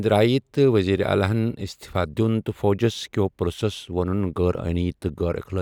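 No technical faults can be heard in this speech recording; the signal stays continuous and intact throughout.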